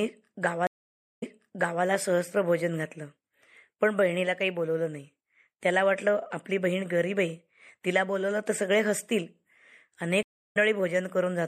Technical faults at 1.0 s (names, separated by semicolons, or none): MP3 compression; stream reconnect